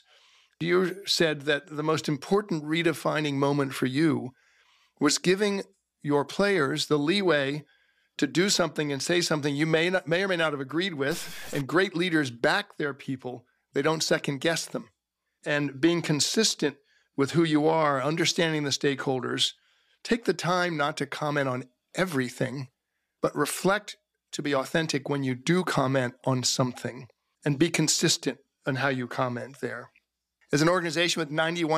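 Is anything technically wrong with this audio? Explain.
Yes, one thing. From 11.11 to 11.61 s, right after "may not have agreed", there's a harsh, buzzy distortion. It's likely a stuck bit pushing samples off by a fixed step of around -35 dBFS.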